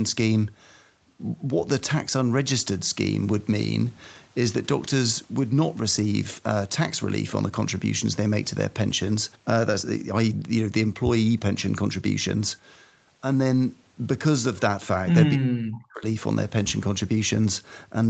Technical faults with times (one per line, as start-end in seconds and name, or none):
15.34-16.04 speech suppressed in double talk